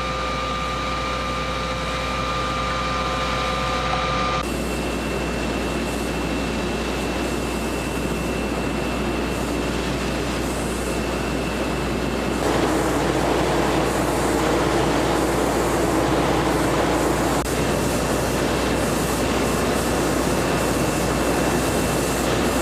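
From the first second to the end, a steady mains hum sits under the sound, locked at 60 Hz with some of its low harmonics stacked above it. The power line is coupling into the signal path, most plausibly through a ground loop or a transformer close to the wiring. It is loud, roughly 10 dB below the wanted signal, so it is plainly audible as a constant low drone rather than a faint background buzz.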